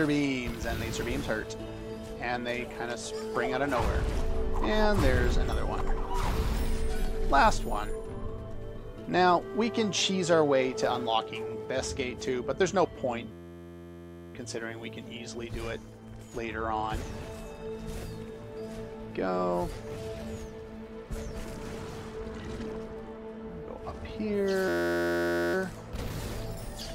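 At 13.32 to 14.35 s and again at 24.68 to 25.54 s there's a system hang loop: a tiny 11.6 ms slice repeats over and over, which fits a 512-sample buffer being replayed while the system stalled, giving a steady buzz at about 86 Hz.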